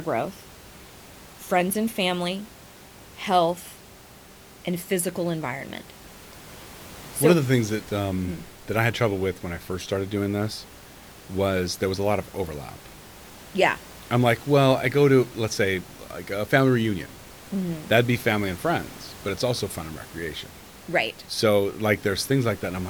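No technical faults can be heard in the speech, with only the room's own background noise sitting about 21 dB below the speaker.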